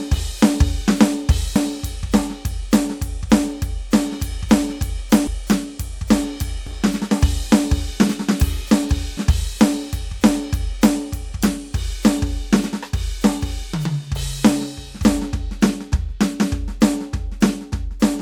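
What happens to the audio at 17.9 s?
Nothing goes wrong at 17.9 s; the music plays through that moment intact, with no dropout, click or distortion.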